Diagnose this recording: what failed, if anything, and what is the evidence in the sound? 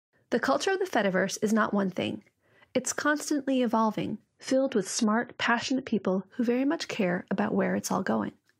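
The network slowed, so the adaptive stream switched to a lower bitrate from 4.27 to 6.27 s, after "thing it's constantly evolving" and before "who very much care". The treble abruptly vanishes above 11.4 kHz with no gap, and codec artefacts rise, consistent with AAC falling from 96 to 32 kbit/s.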